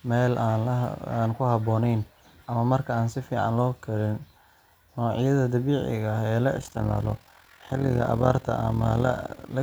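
From about 6.57 s right through to 9.54 s, the speech picks up an overlap-add ripple. Somewhere in the processing chain the audio was chopped into windowed frames and stitched back together, but the overlapping windows don't add up to a flat gain. So the level dips and swells once per frame, by about 11 dB, at something like 40 Hz. You hear it as a fast, rough tremolo sitting over the voice.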